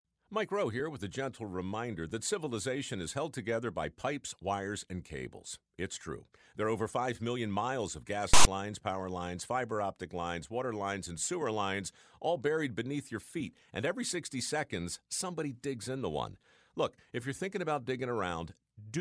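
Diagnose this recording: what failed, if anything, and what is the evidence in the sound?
The decoder read a block of text metadata as if it were sample data, a failure at the storage and playback stage that is heard as file tags played as audio. From 8.34 to 8.45 s, between "million miles of gas" and "lines power lines fiber", the speech gives way to a loud rasp with hard edges, lasting about 0.12 s. The rasp comes from character bytes being read as waveform values, which leaves it pushed off-centre to one side.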